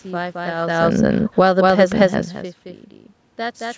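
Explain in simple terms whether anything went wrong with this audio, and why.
Three things went wrong. First, a doubled audio track runs through the whole clip: the same speech is mixed in a second time, trailing about a fifth of a second behind and somewhat quieter. Most likely a second, slower path picked up the same sound and both copies were combined. Because the copy has no fading tail or room echo of its own, each syllable seems to land twice, giving a stuttering, slapback effect rather than a natural reverberation.

Second, from 0.5 to about 1.7 seconds there is automatic gain falling. Around 0.5 seconds the speaker's distance from the microphone also shifts, and the automatic volume control, judging the input too loud, gradually turns itself down. The speech starts out loud and then sinks, and the background noise in the room sinks with it, which shows the change came from the equipment rather than from the speaker alone.

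Third, automatic gain rising follows from about 1.6 to 2.4 seconds. The incoming sound has dropped off sharply, so the same control decides it is now too quiet and steadily turns itself back up. Over most of a second the speech and the room background swell together, growing louder as one. Near 2.0 seconds the speaker's distance from the microphone also shifts, adding to that change in level.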